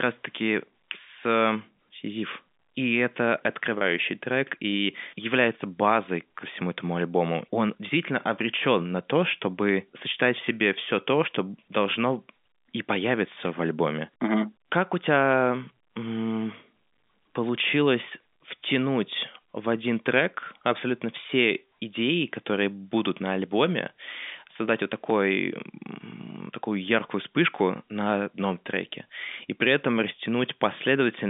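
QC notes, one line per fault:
3.78 to 3.81 s, packet loss with pitch repetition: a 30 ms gap, which fits a single dropped packet, bridged by looping the last pitch cycle, so the sound briefly holds with a slight buzz before carrying on, heard over the band-limited G.711 telephone line.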